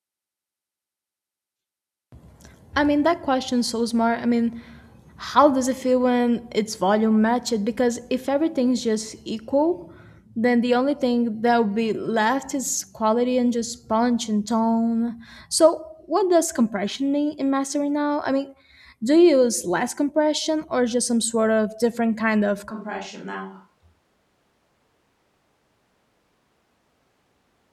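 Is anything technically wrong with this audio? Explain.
Yes. From 22.71 s to the end, the speech switches to a distant microphone. The change is sudden. The sound turns roomy and hollow, and the bass thins out. The level drops by about 10 dB. Room noise rises to roughly 35 dB below the speech. The likely cause is that the close microphone's signal failed or was dropped, leaving only a microphone further from the talker. It picks up more room reflections and less direct sound.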